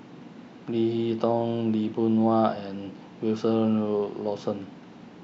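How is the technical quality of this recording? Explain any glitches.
Listening to the recording, nothing stood out as a technical problem.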